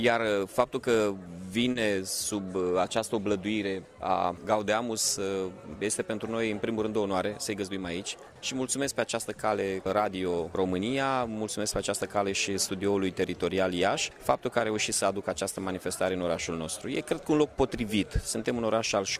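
Around 1.71 to 1.77 s the audio briefly holds one sound with a slight buzz or dip: a short stall from a late packet, where the emptied jitter buffer stretched 40 ms until it arrived. From 7.55 to 7.79 s the audio runs hurried at unchanged pitch, about 114% speed: a jitter buffer speed-up trimming pitch periods, roughly 40 ms in total, to cut the built-up delay.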